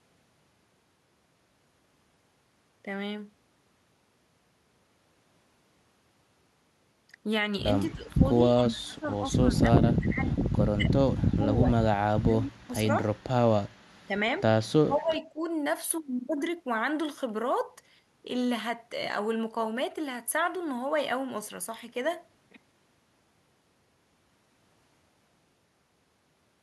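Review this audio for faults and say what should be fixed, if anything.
Speech suppressed in double talk, at 7.88–11.44, 11.6–13.01, 14.06–14.16 and 14.83–15.49 s: the voice ducks by as much as roughly 35 dB, likely from the echo canceller muting both sides while they overlap. Tuning the canceller's double-talk detector so it keeps the near talker open would sort this.

Echo leak at 8.61–8.75 and 14.98–15.03 s: a faint copy of the voice, 205 ms late and roughly 20 to 30 dB down, likely loudspeaker echo slipping past the canceller. Better echo cancellation on the loudspeaker side, or that person using a headset, would fix it.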